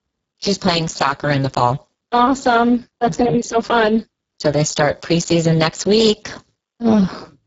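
Speex codec damage runs throughout the speech, from start to finish. This CELP coder rebuilds the voice from a predicted spectral envelope plus a coarse excitation signal. Here the coding is heavy, fitting a low bitrate of roughly 6 kbps, so the excitation gets too few bits. The voice sounds hoarse, grainy and edging toward robotic. Above 4 kHz there is only a shaped, hissy fill, and nothing at all above 7.7 kHz.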